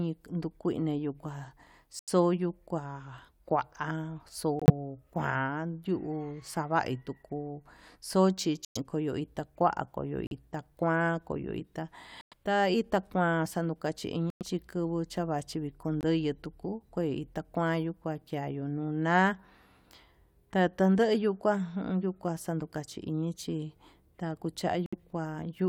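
The speech drops out abruptly eight times. The gaps fall at 1.99 s, 4.59 s, 8.65 s, 10.27 s, 12.21 s, 14.30 s, 16.01 s and 24.86 s. Each lasts between about 0.03 and 0.13 s. This is corrupt frame muted. Damaged compressed frames were rejected by the decoder, and the player filled them with silence. Each hole spans a few frame lengths. The speech resumes on time afterwards, so nothing is lost from the timing.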